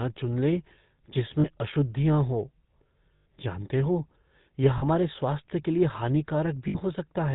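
The speech carries the buzzy, gravelly roughness of the GSM full-rate codec throughout, consistent with a 13 kbps full-rate stream. Pulse-driven vocal-tract modelling coarsens the excitation, and on a spectrogram everything stops at a hard ceiling near 4 kHz. Lost GSM frames then hold the last good sound as a rough, metallic ring. This happens at 1.40 to 1.47 s (40 ms, before "अशुद्धियाँ हो"), at 3.16 to 3.26 s (100 ms, before "जानते हो यह"), at 4.78 to 4.84 s (40 ms, between "जानते हो यह" and "स्वास्थ्य के लिए") and at 6.68 to 6.76 s (60 ms). Their lengths fit runs of 20 ms frames concealed by repetition. On a spectrogram these appear as smeared, frozen harmonic bands, and the waveform shows a repeating envelope.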